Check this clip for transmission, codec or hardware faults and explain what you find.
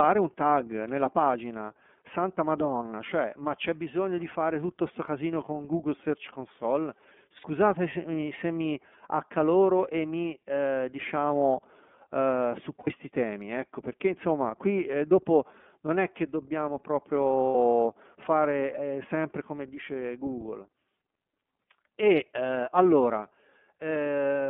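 Yes, two kinds of fault are present.

The whole clip of speech is carried by the iLBC codec. The band runs only from 200 Hz to 3.4 kHz. That fits iLBC's 13.33 kbps mode with 30 ms frames. Each frame is coded on its own, and the damage is plainly audible as a rough, synthetic edge.

Lost iLBC frames occur three times. The first runs from 7.37 to 7.46 s, just before "se mi se mi". The second runs from 12.80 to 12.88 s, between "eh diciamo eh su" and "temi ecco perché insomma". The third runs from 17.50 to 17.55 s. Each gap is 60 ms. The decoder repeats the last pitch cycle mixed with noise. Each sounds like a brief buzzy held vowel, and the speech recovers at once.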